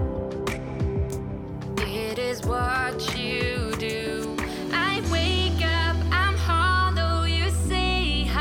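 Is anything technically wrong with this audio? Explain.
Yes. Two bit error spikes occur, at 1.10 s and 5.64 s. A flipped bit in memory or on a digital link knocked one or two sample values away by a power of two before they snapped back. Each is a sharp broadband tick unrelated to the surrounding sound, peaking at about -23 dBFS and about -29 dBFS.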